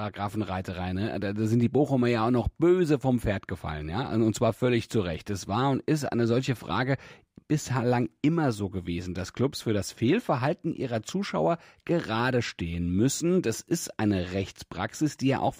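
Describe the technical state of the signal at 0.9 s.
At 0.9 s the speech carries imaging from linear upsampling, present throughout. The sound points to a raise from 24 kHz to 48 kHz by straight-line interpolation, leaving a dulled top end and a faint mirrored copy from 12 to 24 kHz, around 30 dB down. On a spectrogram it shows as a ghostly reflected band above the real content. It is heard as a light metallic shimmer on sibilants.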